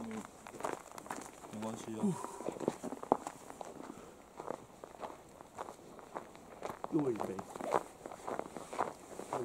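No technical faults are audible anywhere in the clip.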